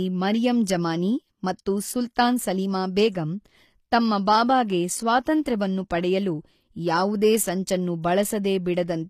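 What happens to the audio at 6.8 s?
At 6.8 s, as through the whole clip, the treble sounds rebuilt rather than real: s sounds come across gritty and lispy, and nothing reaches above 14.9 kHz. That's likely HE-AAC compression, regenerating the top band from copied lower bands, at a rate that fits roughly 24 kbps.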